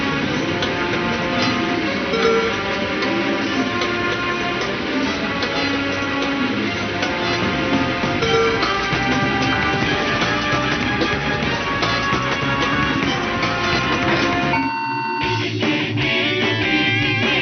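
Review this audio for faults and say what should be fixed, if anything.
Nothing here needs fixing; no faults were found.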